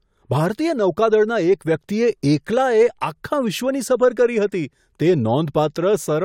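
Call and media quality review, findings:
Nothing to flag on this speech recording; no faults heard anywhere in it.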